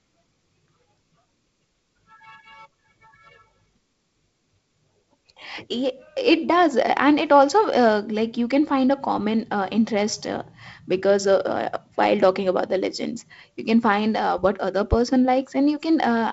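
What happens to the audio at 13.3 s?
At 13.3 s the speech is intact, carried through the same G.722 wideband telephone coding as the rest of the clip with its light upper-band hiss and nothing above about 7.7 kHz.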